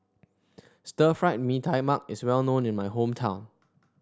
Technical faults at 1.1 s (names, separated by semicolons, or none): none